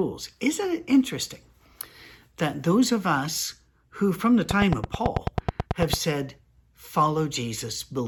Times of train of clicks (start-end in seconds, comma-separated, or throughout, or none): 4.51-5.94